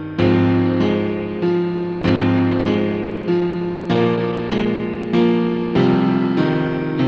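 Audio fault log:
2.01–5.05 s, repeated packet loss (robotic sound): seventeen short holes, the longest 60 ms, were each patched by stretching the preceding sound, concealing about 14% of the span. Unlike a single dropout, the patches recur rapidly, giving a choppy texture with pieces missing throughout the stretch.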